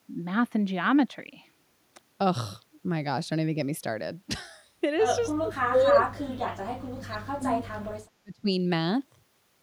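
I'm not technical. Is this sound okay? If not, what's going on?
No. From 5.38 to 7.7 s, and again briefly from 8.23 to 8.5 s, the speech sinks almost to silence. This is speech suppressed in double talk: likely, both sides spoke at once, and the echo canceller muted this voice along with the echo.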